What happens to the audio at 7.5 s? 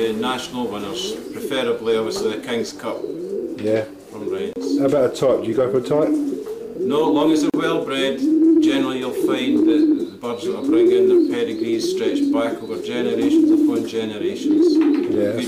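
At 7.50 to 7.54 s there is a gap at a join of encoded pieces, about 38 ms long. Encoder start delay and final-frame padding were left in, so the sound drops out briefly, with smeared edges, then resumes where it stopped.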